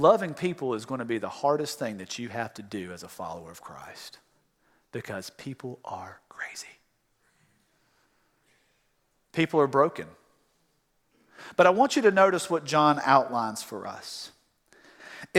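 Speech recording, no technical faults detected anywhere in the clip.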